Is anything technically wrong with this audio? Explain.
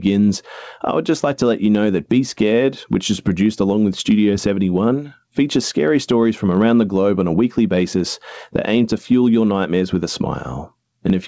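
Yes. Gain pumping runs throughout. The likely cause is overly high input gain with a fast limiter. The gain swings by roughly 15 dB, sounding squashed.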